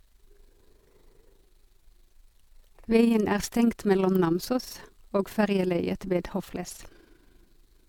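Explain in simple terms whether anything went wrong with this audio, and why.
The speech carries generation loss from start to finish. It sounds swirly and hollow, as if heard through a tube, and the starts of sounds are blurred. The likely cause is that the recording was saved as an MP3 about four times over, each copy made from the last. What sets this apart from a single poor-quality save is the extra smearing. Each re-save adds its own small errors, and they pile up.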